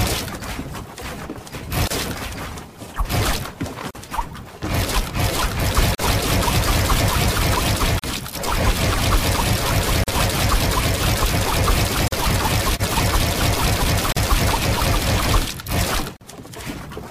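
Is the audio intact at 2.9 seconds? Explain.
Yes, the audio is intact at 2.9 seconds, with no dropout, click, distortion or other fault at that moment.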